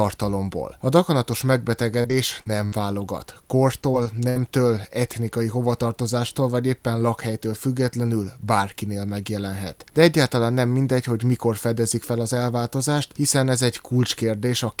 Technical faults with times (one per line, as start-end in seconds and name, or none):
1.71-4.37 repeated packet loss (robotic sound)